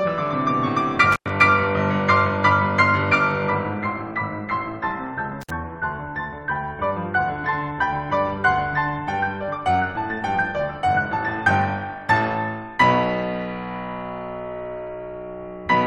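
Intermittent contact breaks this music clip twice, at 1.12 to 1.30 s and 5.41 to 5.50 s, with the signal dropping out for about 98 ms and then 55 ms. A loose cable or plug briefly opens the circuit, cutting the sound with crackle where it breaks and reconnects.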